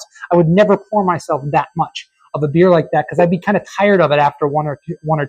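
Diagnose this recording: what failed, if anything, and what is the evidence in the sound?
A switching power supply in the analogue stage is running in an audible mode, causing a switching supply whistle throughout: a tone wandering between 1.52 and 1.58 kHz, roughly 35 dB below the signal.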